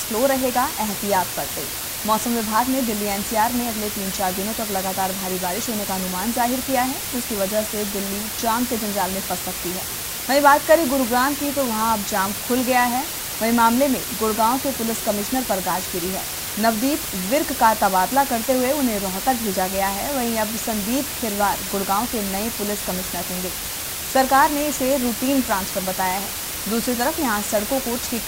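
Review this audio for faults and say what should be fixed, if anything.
The whole clip sits under a constant, even hiss from low bit depth with dither. Noise was added before rounding to very few levels, so the error became steady white noise nearly as loud as the sound itself. That level fits about 5 bits. To prevent it, keep at least 16 bits until the final export.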